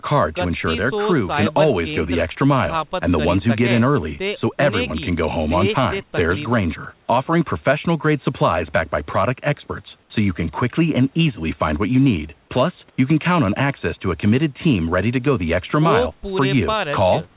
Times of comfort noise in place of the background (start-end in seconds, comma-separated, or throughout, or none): 10.02-10.10, 12.90-12.98